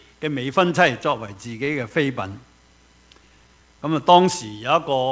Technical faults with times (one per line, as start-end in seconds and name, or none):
1.02-2.30 repeated stalls (stutter)
3.12-4.11 jitter buffer slow-down